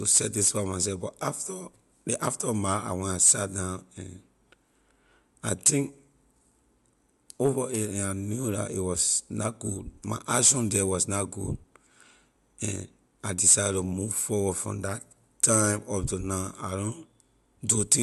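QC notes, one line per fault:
No faults found.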